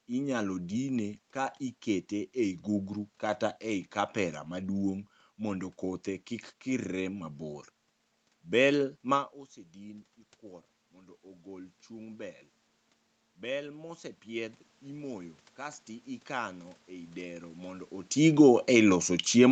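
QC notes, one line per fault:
10.93–12.42 s, automatic gain rising: after "ma osedin ikuoro" the input dropped about 18 dB, so gain climbs about 4 dB; speech and room noise swell together, waveform envelope and noise floor lifting gradually.
18.16–19.51 s, automatic gain falling: after "ikano ei dero mondo" the input was too loud or its background noise too strong for the gain, so gain eases down; speech and background sink together, the waveform shrinking and the spectrogram's noise floor darkening.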